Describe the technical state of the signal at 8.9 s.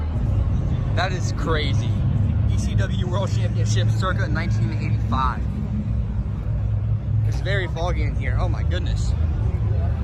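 At 8.9 s the signal is intact, with no dropout, distortion, glitch or other audible fault present at that point.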